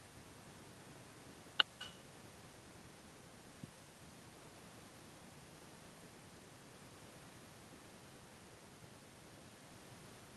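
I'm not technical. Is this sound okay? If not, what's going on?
No. This is echo with no canceller, and it runs through the whole recording. On the far end of the call, the speech was coming out of a loudspeaker, that end's microphone picked it back up, and nothing was filtering it out. So the speech returns after travelling there and back. Every phrase here is trailed, about a fifth of a second later, by a noticeably quieter, thinner copy.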